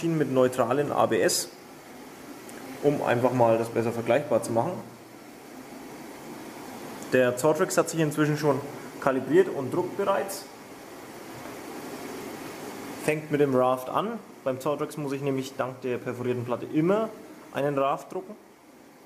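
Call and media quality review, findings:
No findings in this call and media quality review.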